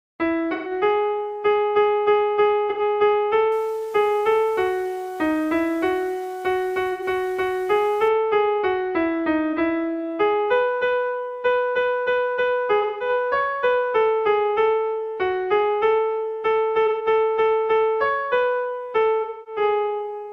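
AAC frame loss with concealment hits the audio seven times, with the decoder patching gaps of about 43 to 256 ms from the previous spectrum. Each gap becomes a smeared, noisy patch at 0.52, 2.69, 6.92, 9.52, 12.81, 16.86 and 19.21 s. From 3.52 to 8.08 s, a grainy distortion sits roughly 30 dB below the signal and changes with it, making the quieter passages gritty. That points to low bit depth without dither, likely rounding to about 7 bits.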